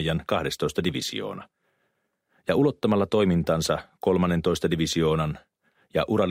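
No technical faults can be heard anywhere in it.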